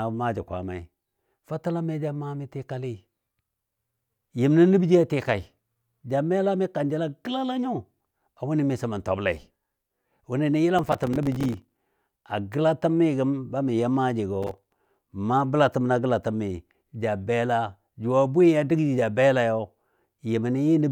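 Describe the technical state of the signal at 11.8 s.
At 11.8 s you're right at the tail of a burst of processor overload crackle that runs from about 10.79 to 11.86 s, ending just before "a gəlatəmi gəm ba". The processor kept missing its deadlines on very short buffers, which sounds like a few milliseconds each, and dozens went unfilled over that stretch. Each miss drops a hard-edged sliver of silence into the speech, so together you get a gritty, tearing crackle over it.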